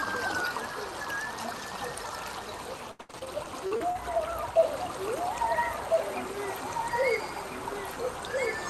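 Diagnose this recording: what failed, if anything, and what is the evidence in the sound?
Repeated packet loss (robotic sound) hits the network stage between 2.91 and 3.97 s. Nine gaps fall in that one-second span, the longest about 79 ms, and concealment covers roughly 30 percent of it by stretching the last received sound across each hole. That is what gives the choppy texture. Plain dropouts would leave silence instead. Here the gaps are filled with smeared continuations, which points to a jitter buffer concealing losses rather than a wiring or driver fault.

A doubled audio track begins abruptly at 4.58 s and runs to the end. A second full-band copy of the sound trails the original by about one and a half seconds, at roughly 5 dB below it. It is a single clean repeat with no decay tail or room colouring, so it is not acoustic echo or reverb, which would fade and take on tone. The likely cause is a second capture path or an editing overlap mixing in an offset copy.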